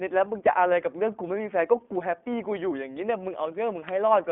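Speech carried throughout by the iLBC codec, a narrowband VoIP coder. The band runs from roughly 250 Hz to 3.5 kHz, with nothing at all above 3.8 kHz, so sibilants and upper consonant detail are missing. Each short frame's excitation is coded independently of the previous one, giving a plainly audible rough, synthetic grain. The coarse texture fits 20 ms frames at the 15.2 kbps mode.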